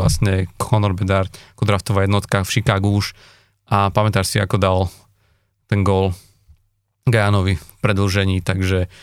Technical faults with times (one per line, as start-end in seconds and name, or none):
none